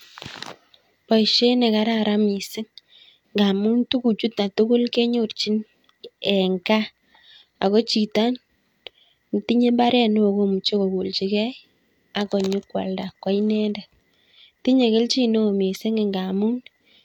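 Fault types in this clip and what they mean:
No technical faults detected.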